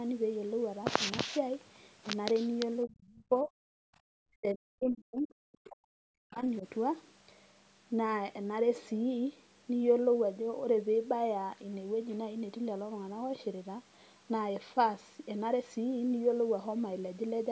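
From 2.85 to 3.53 s the speech sinks hard, down by roughly 35 dB at its worst, for about half a second in total. That's speech suppressed in double talk. The likely cause is both ends talking at once: the echo canceller couldn't tell the near talker from the loudspeaker echo, so it pulled everything down. The same thing comes back much worse from 4.37 to 6.44 s, roughly two seconds of dips bottoming out near 40 dB. Then there's a tiny flicker at 6.61 to 6.65 s, only a few dB.

In between, from 3.81 to 4.09 s, the background is gated by the echo canceller. While the far side was playing, it clamped the microphone down by about 38 dB. The room tone drops out for roughly a third of a second and snaps back once the canceller releases. The call's microphone processing is audible too, with nothing above 8 kHz, but that's just the normal band limit.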